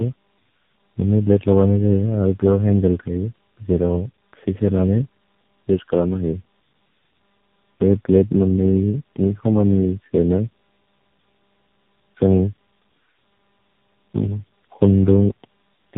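From start to finish the speech carries the signature of tandem speech coding. The call was decoded and re-encoded at each network border, so every coder worked on the previous coder's already damaged output and the errors piled up. The result is rough, muffled and warbly, worse than any single link would produce, with nothing above 3.8 kHz. The buildup suggests about four speech codecs in a row, ending in a low-rate one such as AMR-NB.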